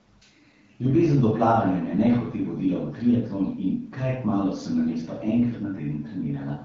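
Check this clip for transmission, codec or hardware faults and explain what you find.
No transmission, codec or hardware faults are audible in this speech; the wideband coding, consistent with AMR-WB at around 12.65 kbit/s, leaves the speech clear with only light coding texture.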